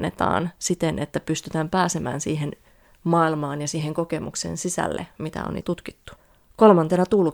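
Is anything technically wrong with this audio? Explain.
No, nothing technical stands out here; it's just speech coming through without any glitches or problems worth pointing to.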